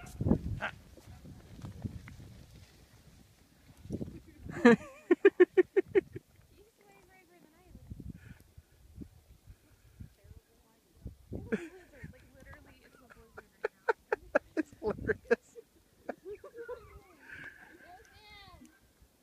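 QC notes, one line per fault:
No technical faults are audible anywhere in the signal.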